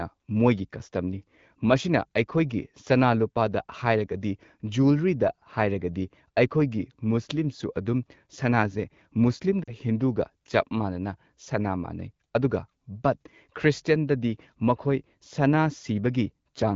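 At 9.64 to 9.71 s, lost AMR speech frames: the decoder replays earlier pitch at falling gain for 40 ms (about two frames), heard as a brief drop to near silence, seen as flattened, fading harmonics.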